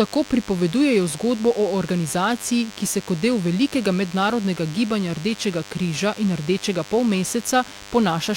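A speech recording with DECT cordless phone buzz running the whole way through: a thin, steady 100 Hz buzz full of harmonics, sitting roughly 20 dB under the voice. A nearby DECT handset or base pulses every 10 ms, and the audio circuitry rectifies those bursts into audible buzz.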